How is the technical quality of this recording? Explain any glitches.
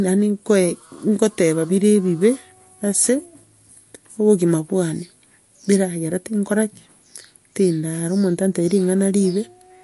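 The speech sounds watery and swirly throughout, with nothing above 11.3 kHz and smeared consonant attacks. This is likely MP3 compression: short of bits, the encoder cut the treble and let weak frequency lines flicker between frames, which fits a low bitrate around 48 kbps.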